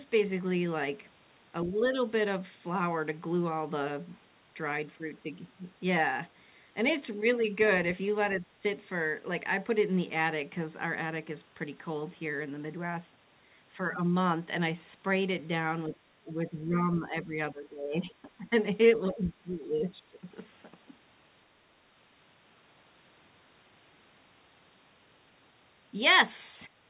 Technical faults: speech suppressed in double talk

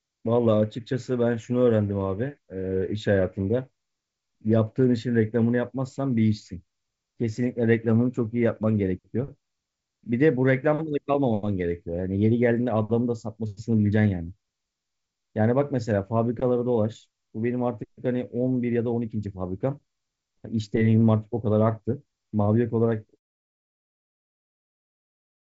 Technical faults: none

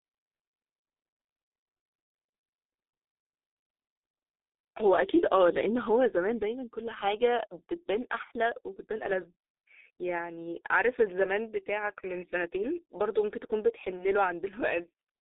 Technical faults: G.723.1 codec

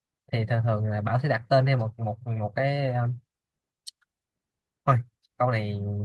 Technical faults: none

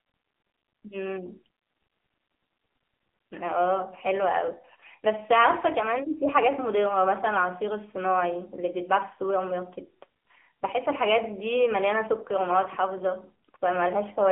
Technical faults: AMR narrowband mobile codec

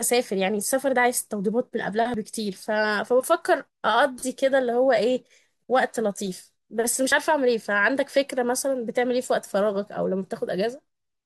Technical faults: audio missing between chunks

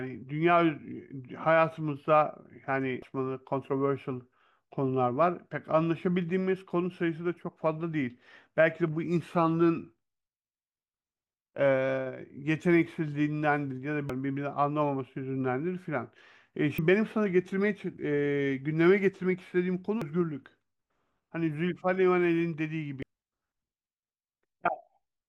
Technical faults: damaged data in a compressed stream

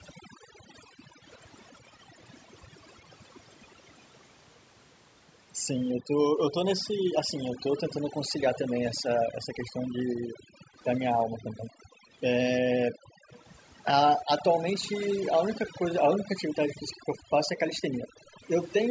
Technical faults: overdone noise removal; background gated by the echo canceller; echo leak

